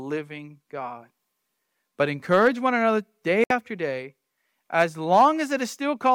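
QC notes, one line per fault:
3.44–3.51 s, digital broadcast dropout: receiver muted on bad frames, cutting a 64 ms silent hole, consistent with two lost frames, between "encourage one another day" and "day as".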